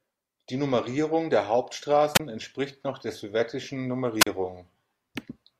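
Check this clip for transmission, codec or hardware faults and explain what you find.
There are two wireless microphone squelch dropouts in this speech clip. The first runs from 2.14 to 2.20 s, just before "entspricht noch der sowjetischen", with the output muted for about 26 ms. The second runs from 4.19 to 4.27 s, right after that same phrase, with a mute of about 40 ms. In both, the FM radio link fades, a short rise of hiss comes through, and then the receiver's squelch shuts the output into a near-silent hole before the voice comes back.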